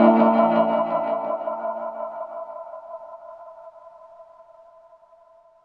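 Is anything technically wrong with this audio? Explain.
No, nothing technically wrong can be heard in this audio. No working path is listed to comment on, and no fault turns up anywhere in the clip.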